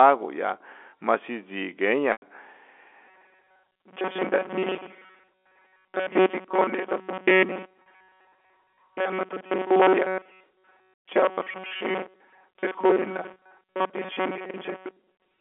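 At 2.12 to 2.22 s, packet loss with pitch repetition bridges a 100 ms gap, consistent with five lost 20 ms packets. The receiver repeats the last pitch period, giving a held, buzzy tone that fades before speech resumes.

From 3.08 s to the end, a robotic sound from repeated short buffers sets in. The audio becomes a rigid metallic buzz near 188 Hz while still loosely following the speech. This is likely caused by the software looping a buffer of about 5.3 ms whenever new audio arrives late, which skips most of the real signal.

The same pitch-repetition concealment returns at 7.82 to 7.86 s for a 40 ms loss and at 13.34 to 13.36 s for a 20 ms loss. Both are brief buzzy holds layered over the robotic texture, within the 300 to 3400 Hz telephone band of the G.711 coding.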